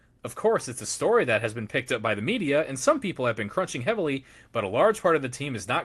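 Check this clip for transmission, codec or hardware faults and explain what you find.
Nothing to flag here, as the speech comes across the call path as expected, with the top end easing off around 12 kHz the way an Opus call link set that way normally sounds.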